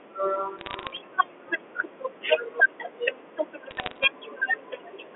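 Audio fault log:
0.59–0.97 s and 3.71–4.05 s, bit errors on a digital phone line: two short bursts of crackle over speech that's otherwise untouched. About 0.5 and 0.4 percent of the bits get flipped in the G.711 mu-law stream, and a hit on a high-order bit, or on the sign of a loud sample, throws a single sample way off, so you hear a sharp tick.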